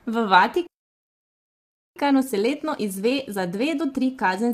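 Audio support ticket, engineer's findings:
Rough, grainy speech across the whole clip, noise filling between harmonics, upper band dull and synthetic. Likely low-delay AAC compression (AAC-ELD); short frames resolve pitch poorly, degradation consistent with a bitrate around 32 kbps.

Playback stall, 0.67 to 1.96 s: output drops to silence mid-flow for about 1.29 s, then resumes. Likely player buffer underrun or blocked audio thread starving the output until recovery.

Time-compressed catch-up, 1.96 s to end: speech hurried at roughly 1.1x, pitch unchanged. Player draining post-stall backlog by cutting and cross-fading short segments.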